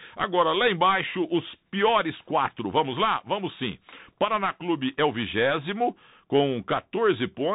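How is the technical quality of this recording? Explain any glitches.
Poor: the speech has gone through a Bluetooth CVSD headset codec for the whole clip, with plainly audible damage. A one-bit delta modulator, at a rate that fits a 64 kbps stream, steps up or down with adaptive step size. Loud, fast consonants outrun the step and distort, s sounds turn scratchy, and grainy hiss sits beneath. A spectrogram shows everything cut off above 3.8 kHz, with a speckled noise floor below. The waveform shows slope-limited, staircase-like edges on sharp transients.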